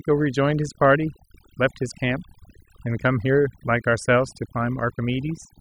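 From start to finish the speech carries overdone noise removal. A noise reduction stage was set far too aggressively, so any frequency band sitting close to its noise estimate gets pulled down hard or gated out entirely, including the softer components of the voice itself. Between phrases the floor drops, broken only by isolated twinkling fragments.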